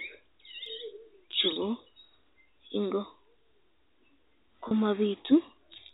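At 1.53 to 1.56 s and again at 4.68 to 4.71 s, packet loss with pitch repetition bridges 30 ms gaps, probably one packet each, leaving brief buzzy, held tones in the telephone-band speech.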